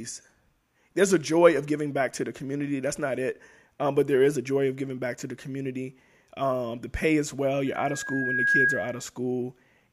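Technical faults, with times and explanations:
7.66 to 9.05 s, loudspeaker feedback squeal: A single tone at 1.6 kHz rises out of the speech. It swells over roughly a second and ends up a little louder than the speech itself. The microphone is picking up the loudspeaker it feeds. At 1.6 kHz the loop gain has passed one, so that frequency keeps reinforcing itself on each trip around the loop. It grows into a steady squeal and stops only at 9.05 s.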